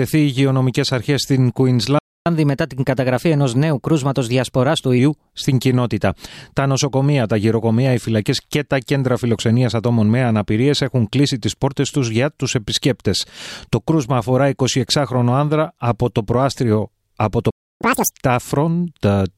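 The player twice ran short of data or had its output thread blocked, most likely, causing a playback stall each time: the audio cuts to silence from 1.99 to 2.26 s (about 0.27 s) and again from 17.50 to 17.81 s (about 0.30 s), then resumes. Each stall is followed by catch-up at higher speed, as the player resamples its backlog faster to recover the lost time. After the first gap, from 2.26 to 4.99 s, the audio runs at 1.1 times normal speed, lifted by roughly a semitone and a half, before settling back. After the second, the catch-up is short and extreme: from 17.81 to 18.11 s it plays at double speed, with pitch jumping by about ten semitones, a brief chipmunk-like burst before normal playback returns.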